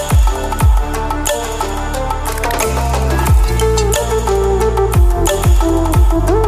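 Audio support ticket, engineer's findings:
No dropouts, distortion, timing errors or level problems found on listening; signal path shows no technical fault at any point in the recording.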